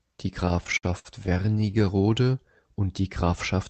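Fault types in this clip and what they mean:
repeated stalls (stutter): Between 0.45 and 1.88 s the speech drags and hiccups through about two dozen brief hangs, the longest about 59 ms, adding roughly 0.37 s. Packets arrived late, so the jitter buffer kept emptying and the receiver stretched the last sound until data resumed.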